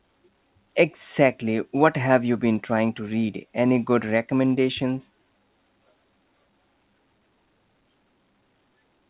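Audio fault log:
No faults are heard; the speech carries the narrow band of a WebRTC call path, with nothing above 4 kHz, which fits G.711 A-law coding at 64 kbps.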